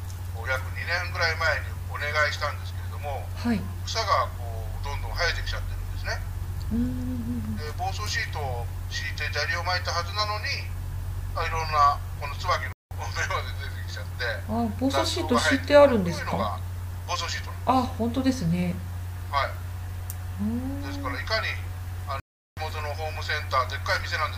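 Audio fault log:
12.73–12.91 s and 22.20–22.57 s, block of digital silence: the sound drops abruptly to silence and returns with no fade, leaving an audible hole of about 186 ms and then about 372 ms. The samples were zeroed rather than attenuated, probably because the output buffer went unfilled in time. The lengths fit whole blocks of 8192 and then 16384 samples.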